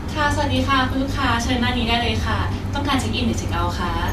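No technical faults can be heard at any point in the recording. There is no moment in the speech that needs a time or a value noted against it.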